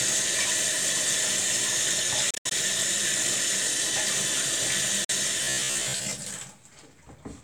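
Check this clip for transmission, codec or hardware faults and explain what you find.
Three faults are audible: two Bluetooth dropouts and a stretch of robotic sound from repeated short buffers.

Bluetooth dropout, 2.30 to 2.52 s and 5.04 to 5.10 s: likely packets reaching the headphones too late and being discarded, so the audio cuts to silence and resumes further on. The first hole is broken up, about 130 ms lost across roughly 200 ms, with the longest gap near 73 ms. The second is shorter, with about 44 ms lost.

Robotic sound from repeated short buffers, 5.44 to 6.13 s: audio likely arrived too seldom, so roughly 15 ms slices were replayed in place of about half the real audio. This imposes a fixed metallic buzz at 66.8 Hz.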